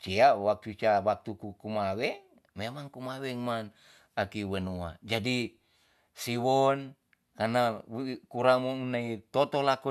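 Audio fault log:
No faults are audible anywhere in this speech clip.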